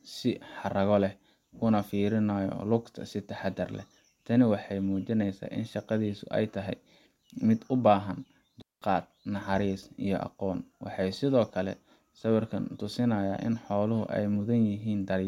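At 8.62 s the digital wireless dropout occurs: the receiver lost too much data from the link and muted itself, fading out almost instantly. The speech drops into a clean hole of near silence lasting 0.2 s, ending at 8.82 s, with no noise burst on either side.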